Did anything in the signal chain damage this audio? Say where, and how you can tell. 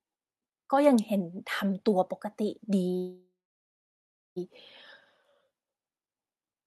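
Yes, there's a call audio freeze from 2.97 to 4.38 s, most likely packets stalling in the network so the jitter buffer ran dry. The last sound trails off into about 1.0 s of silence, then resumes where it stopped, nothing lost, just 1.39 s later.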